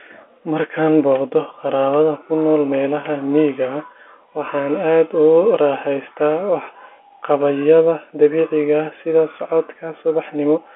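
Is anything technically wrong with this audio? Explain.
No, nothing is technically wrong: the speech carries the narrow 250 Hz to 3.4 kHz band of an ordinary G.711 telephone line, which is how that path is meant to sound.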